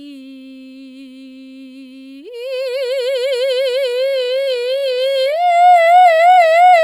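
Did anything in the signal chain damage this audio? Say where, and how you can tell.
Yes. From 3.84 s the music abruptly slows to 0.505× speed, yet its pitch stays put. That is a time-stretched section, likely from processing software. A slow playback clock would also lower the pitch.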